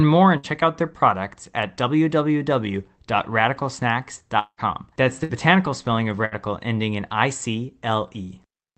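Packets were lost in a short burst at 0.37 to 0.46 s, just before "out their products at". The receiver extended the last sound for about 60 ms, turning it down as it went, then resumed with roughly 60 ms of audio skipped. The same happens at 5.24 to 5.32 s, before "spelling of", and at 6.25 to 6.35 s, between "spelling of" and "ending in I".

From 4.39 to 4.61 s a long network dropout is the likely cause. The stream stopped arriving, so the last sound is stretched and fades over about 180 ms, ending in about 60 ms of silence. The sound picks up further on, with about 180 ms missing.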